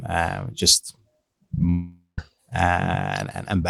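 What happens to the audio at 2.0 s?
At 2.0 s the speech is inside a gap running from about 1.69 to 2.19 s, most likely a long network dropout. The final sound before the break is stretched into a fading buzz, then about 150 ms of silence follows, and speech resumes with roughly half a second of it simply gone. On a spectrogram the last harmonics smear flat and dim into an empty band. The waveform shows a decaying repetitive tail and then a flat line before speech resumes abruptly.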